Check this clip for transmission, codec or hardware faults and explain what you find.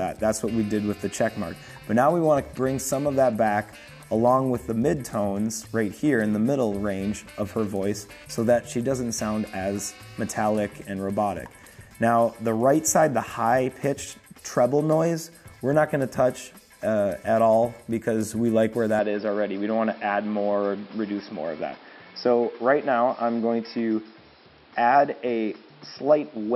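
One fault is present. From 18.99 s to the end, the input was likely switched to a poorer device. That device passes a narrower band, with nothing above 5.5 kHz. The sound turns dull and boxy. A new background noise appears, roughly 30 dB below the signal. The level stays about the same, and there is no gap at the switch.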